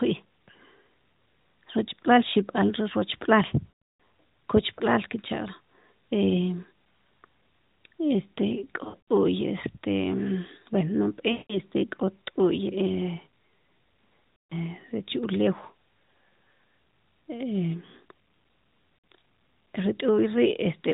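Speech over a narrowband mobile link, band-limited to 4 kHz with light codec colouring, briefly smears into a drawn-out, fading warble at 3.70, 8.84, 11.32, 14.37 and 18.98 s. These are lost AMR speech frames: corrupted frames, up to about 300 ms at once, were filled by repeating the last good settings with falling gain.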